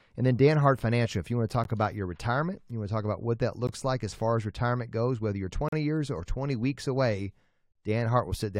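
At 1.64 s, after "if you want to", at 3.67 s, after "talk about what that", and from 5.69 to 5.73 s, after "retirement goes whether you're", gaps between stream segments open up, spaced about 2 s apart. Mismatched segment timestamps leave holes that the player fills with hard-edged silence: roughly 15, 16 and 40 ms long. Unlike a dropout, the speech resumes exactly where it stopped, so nothing is missing.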